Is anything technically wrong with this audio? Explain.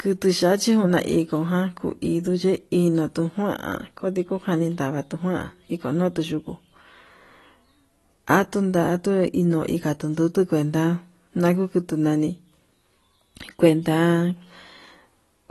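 Yes. Throughout the speech there is audible codec damage, most likely from AAC compression. Nothing is present above about 12.1 kHz, so the highest frequencies are missing and the sound is dull. At a low bitrate, consistent with around 32 kbps, the encoder discards high bands and coarsely quantises the remaining frequency lines per frame. This leaves spectral holes that come and go, heard as a smeared, warbling texture on sustained sounds and a fizzy edge on sibilants.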